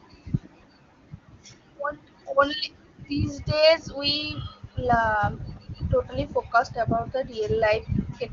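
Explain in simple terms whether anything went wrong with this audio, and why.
Nothing went wrong; this speech sounds as intended.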